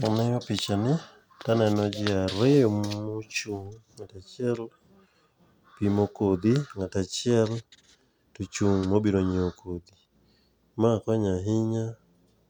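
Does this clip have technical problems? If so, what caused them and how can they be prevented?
Yes. Throughout the speech there is generation loss: a swirly, hollow smear with softened consonant attacks. The likely cause is repeated MP3 decoding and re-encoding, which fits a 128 kbit/s chain run about four times, each pass quantising on a shifted frame grid so that noise and spectral holes accumulate. What separates it from a single low-bitrate encode is that the band still reaches about 20.1 kHz, yet the sound is more hollow than that bandwidth suggests. To prevent it, edit from a lossless master and encode to MP3 only once, at the final step.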